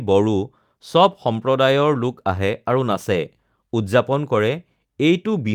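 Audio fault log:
Nothing to log here; this bit of speech comes across without any technical trouble to point at.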